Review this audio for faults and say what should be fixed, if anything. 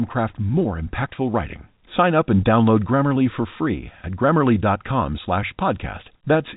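Nothing here needs fixing: the speech comes through the usual telephone-band coding, topping out around 3.8 kHz, and that's simply the format working as it should.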